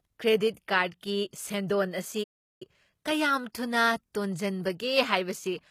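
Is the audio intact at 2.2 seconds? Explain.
No. Just after 2.2 seconds, at 2.23 s, the sound cuts out mid-flow and stays silent for about 0.37 s, resuming at 2.62 s. That gap is a playback stall: the player most likely ran out of buffered data, or its playback thread was held up, so the output went quiet until it caught up, and the speech then continues from where it broke off.

The damage at that moment is not only the dropout. Around it, as across the whole clip, sibilants and the upper range sound gritty and metallic. That fits HE-AAC compression at a low rate, likely near 20 kbps. The codec keeps only the lower spectrum and rebuilds the treble by copying lower bands upward under a coarse envelope, so the top end sounds bright but synthetic and doesn't match the harmonics below it.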